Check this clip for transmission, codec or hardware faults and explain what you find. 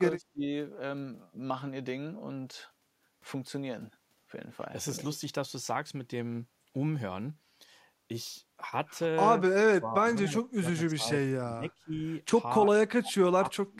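The speech shows one recurring fault: speech suppressed in double talk, at 0.19–0.44 s, 9.69–11.16 s, 11.55–11.93 s, 12.6–13.14 s and 13.39 s to the end. The level drops sharply in each, by roughly 20 to 30 dB, and the longest stretch loses about a second of speech. The likely cause is an echo canceller that could not tell this talker from loudspeaker echo while the far side spoke, so it attenuated everything, leaving the voice ducked.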